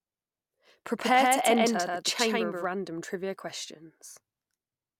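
From 0.99 to 2.65 s, just before "random trivia", a doubled audio track appears. An equally loud dry copy trails by roughly 150 ms, likely from a second, slower capture path.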